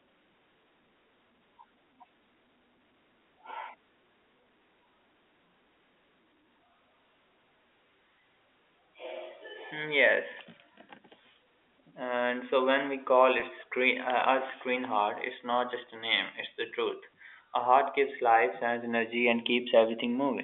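At 13.40 to 13.42 s, right after "so when we call" and before "screen uh", the sound briefly holds on one slightly buzzy, sustained tone. This is packet loss with pitch repetition: about 20 ms of audio went missing, which fits one lost packet, and the receiver filled the gap by repeating the last pitch period.

From 18.30 to 19.45 s, following "heart gives", a single high tone near 4.6 kHz swells over well over half a second until it is louder than the speech. This is loudspeaker feedback squeal: the microphone picked up its own loudspeaker, and at that frequency the loop's gain rose above one, so the tone kept building.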